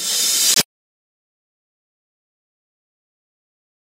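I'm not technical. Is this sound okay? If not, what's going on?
No. There's a corrupt frame muted from 0.53 to 0.59 s. A few damaged chunks of the audio file couldn't be read, so the player swapped in sudden silence there.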